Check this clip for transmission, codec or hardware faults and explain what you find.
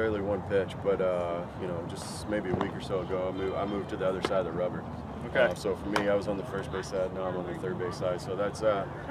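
Nothing audible here points to a transmission, codec or hardware problem.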